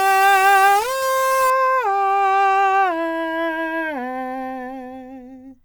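A music clip whose first 1.5 s, from 0.0 to 1.5 s, was likely reduced to a very low bit depth without dither, with each sample simply rounded to the nearest coarse step, which fits roughly 4 bits. Because that rounding error tracks the waveform, the opening music carries grainy distortion or hiss, with the distortion shifting as the sound changes. The error sits only about 15 dB below the music.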